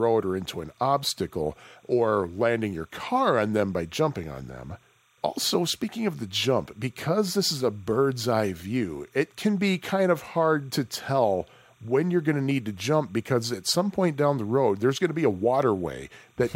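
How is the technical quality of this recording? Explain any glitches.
The recording has one fault, timecode bleed, present throughout the speech from start to finish. Linear timecode from an adjacent track or cable has leaked into the audio path. Its square-wave code flips between two pitches, around 1 kHz and 2 kHz, at a 30-frames-per-second rate, so a faint chirping warble sits roughly 40 dB below the speech. A fixed test tone or hum holds one steady pitch, but this warbles in a rhythmic, data-like pattern.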